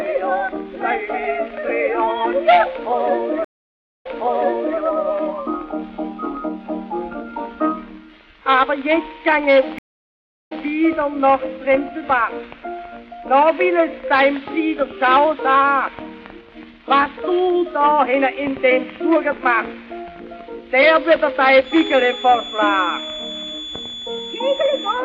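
Stream reconnects occur at 3.45–4.79 s and 9.78–10.65 s. The connection dropped, giving silences of 556 ms and 675 ms, and the restarted decoder resumes on resent audio about 0.79 s and 0.19 s earlier. A feedback whistle, a thin 3.4 kHz tone at one pitch roughly 15 dB below the sound that slowly swells and fades, runs from 21.6 s to the end. It is likely a loudspeaker-to-microphone loop held just short of runaway.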